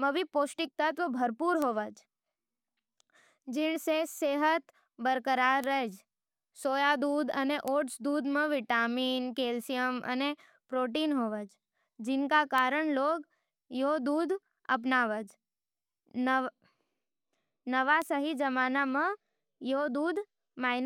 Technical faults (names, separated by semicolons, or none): bit error spike